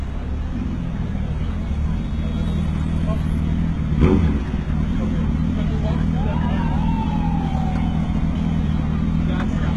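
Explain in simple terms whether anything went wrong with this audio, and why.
Throughout the clip, the high end sounds bright but gritty and metallic, and nothing reaches above 11.8 kHz. This is likely HE-AAC compression: the encoder kept only the lower sound in detail and rebuilt the treble by copying lower parts upward, so it doesn't match the original.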